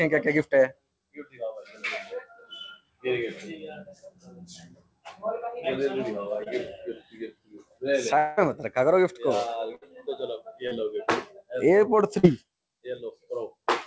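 At 6.44 to 6.48 s a brief smear breaks the sound. This is short concealed packet loss: about 20 ms of the call arrived too late to decode, so the receiver extended the preceding sound for roughly 19 ms and then blended back into the real signal.

From 8.18 to 8.39 s the sound turns into a held, decaying buzz or hiss for nearly 0.2 s, with no true silence, and then resumes further along. The likely cause is a long network dropout, in which around 200 ms went missing and was papered over with continued sound.

At 9.75 to 9.84 s a shorter held buzz or hiss fades before the audio resumes. This is a burst of packet loss: about 60 ms was lost in a row, and the concealment stretched the preceding sound while turning it down.

The same short concealed packet loss returns as brief wobbles at 10.68 to 10.73 s and 12.19 to 12.25 s, each hiding about 40 ms of missing audio. Throughout the clip, the call codec's band limit means nothing is heard above 8 kHz, which fits a G.722 path.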